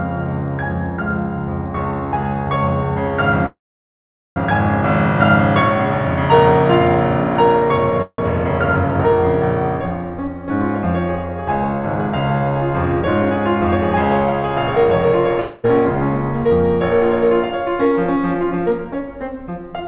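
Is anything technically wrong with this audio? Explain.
Yes, a few things, all heard through a phone-band call path that stops at 4 kHz.

Call audio freezes at 3.46–4.38 s and 8.02–8.20 s: the music stalls, briefly buzzes, then goes quiet, likely because delayed packets emptied the jitter buffer. It resumes where it stopped, nothing lost.

Jitter buffer speed-up at 12.86–14.34 s (109%) and 17.85–19.08 s (111%): the receiver trimmed tiny pitch-period slices to shed a backlog, roughly 0.15 s each time, so the tempo rushes while pitch holds.

Long network dropout at 15.40–15.66 s: a fading buzz covers the gap, and then the music jumps ahead. About a quarter second is simply gone, likely from packets that never arrived.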